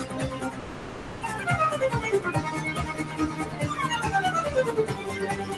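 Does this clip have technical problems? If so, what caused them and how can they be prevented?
Yes. A noise suppressor tuned for speech stays active on this sound throughout. It treats sustained tones, ambience and decay as noise, so attacks pass while held parts and tails are pulled down by around 5 dB, giving a pumping, fluttering or thinning effect. Bypass speech-oriented suppression for music and general sound, or use a music mode.

From 0.59 to 1.25 s there is a gap that most likely comes from a long network dropout. About 600 ms of audio never arrives, and the receiver covers the hole with a synthesized continuation of the preceding sound for about 640 ms. The audio resumes with the lost section gone and a small shift in timing. A steadier network path, or more forward error correction and redundancy, reduces such losses.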